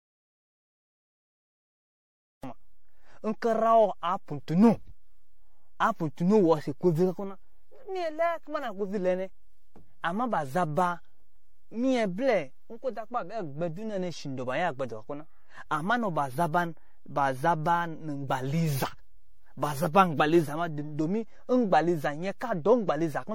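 A speech recording whose input was likely lost at the source, so the recorder kept writing silence: the clip opens in silence with no room tone until 2.43 s, when speech cuts in mid-flow. A DC offset shifts the whole waveform off zero by a constant amount throughout; it can't be heard directly, but it uses up headroom and shows as steady energy at the very bottom of the spectrum. Generation loss runs through the entire clip as well: the swirly, smeared, hollow texture with blurred attacks and nothing above 16.5 kHz points to MP3 decoding and re-encoding about ten times at around 60 kbit/s, each pass on a shifted frame grid, and the sound is worse than that bitrate alone would explain.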